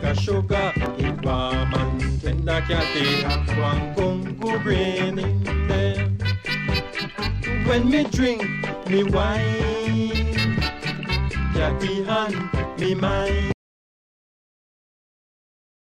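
A tiny skip at 0.86 s, where about 13 milliseconds vanish: an overlap between stream segments, with the player trimming sound that was never actually doubled. At 13.52 s the sound cuts to complete silence with no room tone and stays silent to the end, an audio dropout to silence, likely from the input being lost while silence kept being written.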